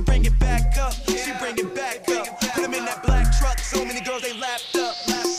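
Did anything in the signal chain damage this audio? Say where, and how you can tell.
No, nothing in the signal chain damaged this audio that I can hear.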